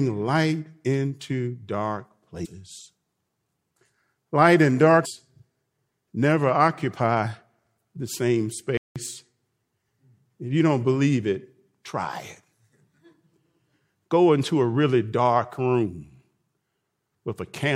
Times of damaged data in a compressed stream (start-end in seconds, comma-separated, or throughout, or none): 2.44, 5.04